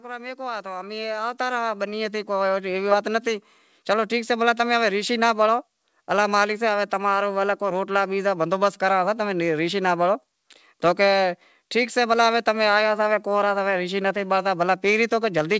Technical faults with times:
0.05-4.39 automatic gain rising

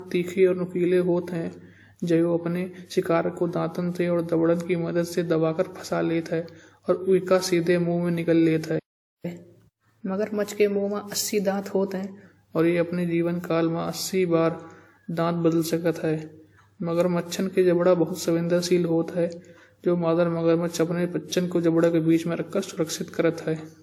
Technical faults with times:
0.00-23.83 generation loss
8.79-9.25 playback stall
9.25-12.25 catch-up at higher speed

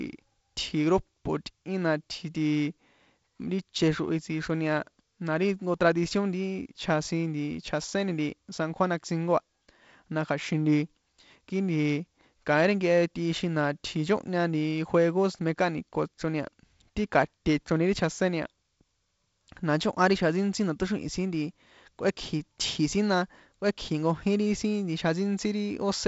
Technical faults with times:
none

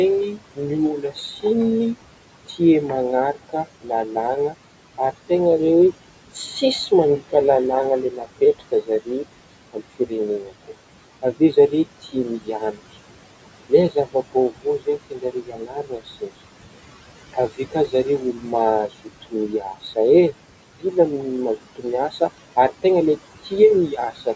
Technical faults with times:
0.00-24.36 noise suppressor artifacts
0.30-2.60 speech cut by the noise suppressor
3.34-5.30 speech cut by the noise suppressor
6.34-7.33 speech cut by the noise suppressor
8.11-12.81 speech cut by the noise suppressor
13.69-16.30 speech cut by the noise suppressor
17.33-19.97 speech cut by the noise suppressor
21.57-22.84 speech cut by the noise suppressor
23.39-24.27 speech cut by the noise suppressor

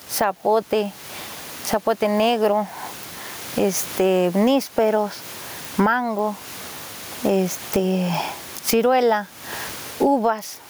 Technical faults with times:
0.00-10.69 gain pumping

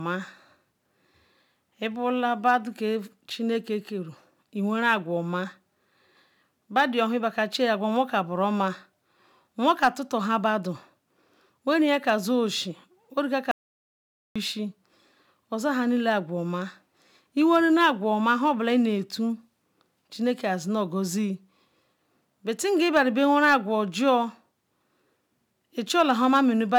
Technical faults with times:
13.51-14.36 audio dropout to silence

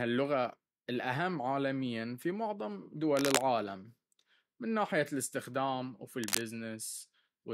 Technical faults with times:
3.10-3.44 cable scratch noise
6.23-6.42 cable scratch noise

